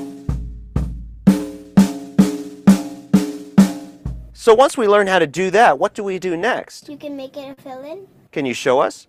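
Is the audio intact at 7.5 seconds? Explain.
No. From 7.53 to 7.59 s, short concealed packet loss replaces 37 ms of the 40 ms of missing audio by extending the preceding sound. It is heard as a brief smear and shows as frozen, blurred spectrogram bands.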